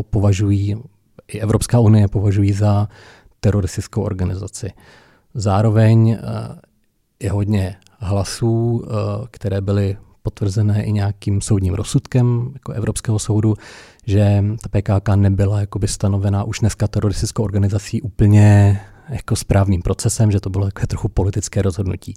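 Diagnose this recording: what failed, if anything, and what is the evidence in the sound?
Nothing in the speech stood out as a fault on listening.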